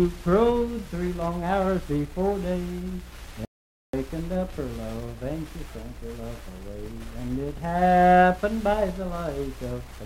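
The audio cuts out cold at 3.45 s and comes back at 3.93 s, a classic audio dropout to silence: nearly half a second of silence with no room tone underneath. It's likely a lost input or momentary mute while the recorder kept writing, so that stretch is simply gone.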